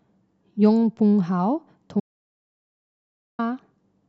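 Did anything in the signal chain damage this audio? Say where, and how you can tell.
Yes. An audio dropout to silence runs from 2.00 to 3.39 s. Speech cuts to silence, with no room tone. The input link likely dropped.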